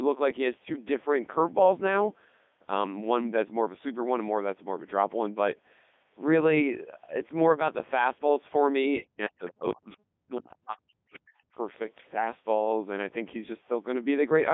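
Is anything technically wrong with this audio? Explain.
Yes. Throughout, the speech passes through the Codec 2 vocoder, which fits its 3.2 kbit/s mode. Only pitch, voicing, energy and spectral envelope are sent, then rebuilt from sine waves within 250 Hz to 3.6 kHz, so the voice sounds heavily robotic and buzzy.

From 0.64 to 0.76 s there are bit errors on digital voice radio. Flipped bits, at a rate of a few percent, corrupt the parameters of a few frames, and the voice jerks in pitch and level into a brief warbling bleep.

At 9.47 to 9.52 s and 11.13 to 11.19 s, the other side's voice is leaking through, likely because the echo canceller missed loudspeaker sound reaching the microphone. Each event is a faint scrap roughly 20 to 25 dB below the main speech.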